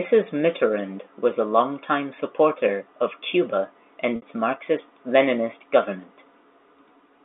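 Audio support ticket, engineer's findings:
Packet loss with pitch repetition at 4.16–4.22 s. Gap of about 60 ms, which fits three 20 ms packets going missing. Jitter buffer's concealment loops the last pitch period, so you hear a brief held, buzzy tone that fades out over roughly 50 ms. Speech then cross-fades back in. It all sits inside the G.711 line's narrow band, about 250 Hz to 3.6 kHz.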